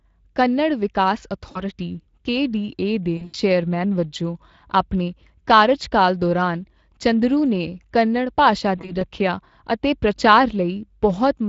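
Speex codec damage runs through the whole speech clip and is plainly audible. The sound fits a Speex stream at about 20 kbps, where the coder has too few bits for the excitation, so the voice comes out hoarse and noisy, with a grainy, roughened texture.

VoIP packet loss concealed by the speech codec occurs three times. At 1.51 to 1.63 s, after "ਕੰਨੜ ਵਿਕਾਸ", about 40 ms goes missing. At 3.17 to 3.36 s, between "ਕੇਡੀਏ ਦੇ" and "ਚੇਅਰਮੈਨ ਵਜੋਂ ਆਪਣੇ ਕਾਰਜਕਾਲ", about 120 ms is lost across 160 ms, with the longest gap lasting 80 ms. At 8.77 to 9.03 s, after "ਚੰਦਰੂ ਨੇ ਕੰਨੜ ਭਾਸ਼ਾ", three separate 20 ms gaps fall within about 240 ms. In each case the decoder repeats its last pitch and filter at falling gain, which stretches the sound into a buzzy tone or a coloured noise that fades.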